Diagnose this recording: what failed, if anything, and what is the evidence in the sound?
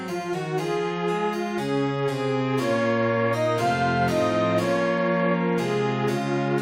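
Nothing failed; no faults detected.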